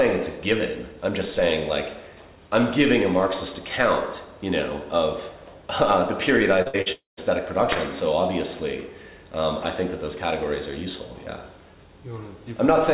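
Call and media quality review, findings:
Short concealed packet loss at 6.62–6.67 s and 6.82–6.88 s. Brief smears. Receiver concealment extended the last sound over about 40 ms of missing audio each time.

Burst of packet loss at 6.67–6.76 s. Last sound held and fading out. Jitter buffer and concealment covered roughly 60 ms of consecutive lost packets, then playback resumed further along.

Long network dropout at 6.92–7.19 s. Last sound held and fading, then about 160 ms of silence. Likely cause: network outage, with about 260 ms never played. Audio returns past the gap. All audio is band-limited, with nothing above 4 kHz, which fits a 64 kbps G.711 mu-law call path.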